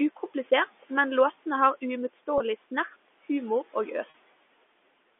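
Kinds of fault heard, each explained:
Packet loss with pitch repetition: audio data failed to arrive and the receiver filled each gap by repeating the last pitch period of the speech. A gap of 20 ms at 2.38 to 2.40 s fits one lost packet, and a gap of 40 ms at 4.10 to 4.14 s fits two in a row. Both are brief enough that the sound briefly holds and turns buzzy before the narrow telephone-band speech resumes.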